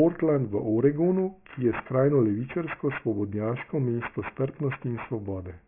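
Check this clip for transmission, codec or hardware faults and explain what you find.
One fault runs through the whole clip. Aliasing, present throughout: the speech was downsampled without an anti-alias filter, so energy above 3 kHz folds back, which fits a 6 kHz rate. Sibilants turn gritty and metallic, the folded content sitting roughly 15 dB under the speech.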